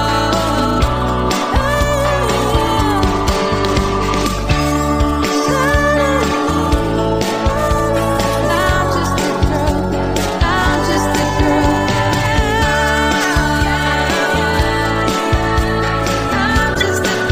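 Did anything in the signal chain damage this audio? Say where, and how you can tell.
Yes: a corrupt frame decoded at 16.74–16.82 s, in the codec stage. A few damaged frames were played anyway, misplacing energy into a brief burst.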